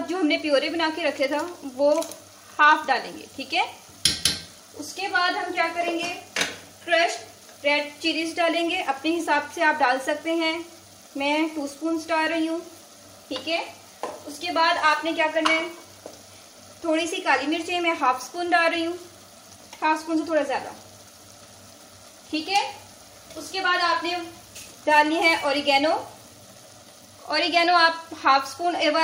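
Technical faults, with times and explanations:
No technical faults detected across the clip.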